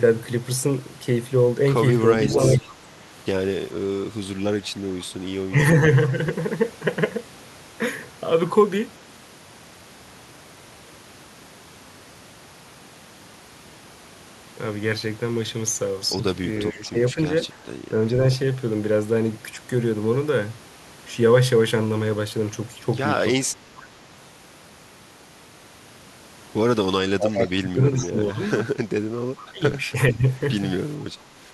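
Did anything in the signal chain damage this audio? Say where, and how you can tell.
Yes, in call processing: speech suppressed in double talk at 2.23–2.72, 5.5–5.82, 16.72–17.18, 23.5–23.82, 27.03–28.59 and 29.52–30.26 s. The speech dips by up to about 20 dB, likely because the echo canceller ducked its own talker along with the loudspeaker echo.

An echo leak occurs at 2.23–2.73 s and 29.39–29.46 s. A copy of the speech repeats 447 ms late, about 10 dB and 25 dB below it, likely loudspeaker echo the canceller failed to remove.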